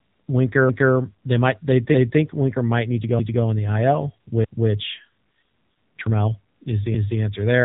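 From the start, the speech carries the AMR narrowband mobile codec sound. Everything above 4 kHz is gone, and the voice has a buzzy, synthetic edge, which fits a low mode around 7.95 kbps. The codec rebuilds each 20 ms frame from a vocal-tract model driven by sparse pulses rather than sending the waveform. That pulse-driven buzz sets it apart from a plain 4 kHz low-pass filter, which would sound dull but still natural.

At 3.19 s an overlapping-chunks fault makes a 250 ms stretch play twice, ending at 3.44 s. The stretch matches where one processing block of about a second starts before the previous one has finished. The result is an audible stutter. Unlike a dropout, nothing is missing: a piece of sound repeats. Unlike a looping glitch, it repeats only once before the audio moves on.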